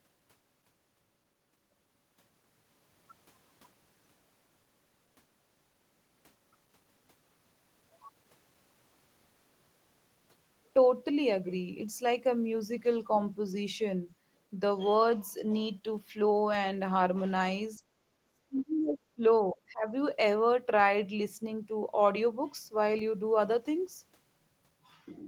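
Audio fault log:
18.26 to 19.22 s and 19.43 to 19.87 s: speech suppressed in double talk. The speech dips hard, by about 30 dB and then about 35 dB, for most of each span. An echo canceller likely mistook the near talker for loudspeaker echo and attenuated both.
22.99 s: DC step. The waveform's zero line jumps at once, and this is heard as a low thump or click. The offset then fades away, drained by a 2 Hz high-pass filter. The speech carries on unchanged through it.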